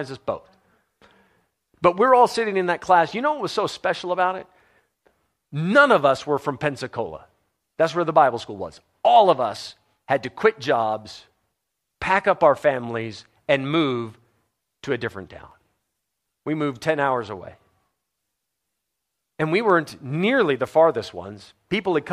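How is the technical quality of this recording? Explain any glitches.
No technical glitches can be heard anywhere in this speech recording. There is nothing here that needs explaining.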